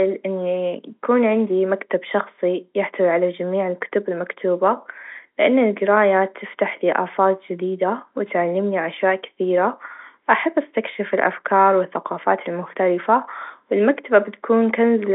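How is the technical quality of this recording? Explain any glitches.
No glitches to report: the speech comes through as a standard G.711 telephone line, band-limited to roughly 250 Hz to 3.6 kHz with nothing above 3.8 kHz, which is simply the normal character of that coding.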